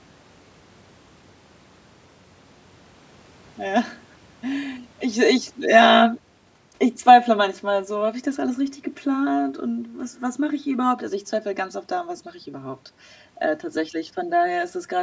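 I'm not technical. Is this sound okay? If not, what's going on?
No. Throughout the clip there is channel delay (comb filtering). One side of the recording arrives a few thousandths of a second late, and when both sides are combined, parts of the sound cancel. That gives a hollow, boxy tone that stays constant rather than coming and going.

From 5.06 to 7.91 s, automatic gain falling: the device decided the sound was too loud or its background noise too strong, and gradually turned it down. The talker also shifts position around 5.0 s, but the telltale sign is that the background room noise sinks along with the voice.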